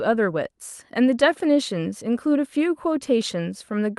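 No technical faults are audible.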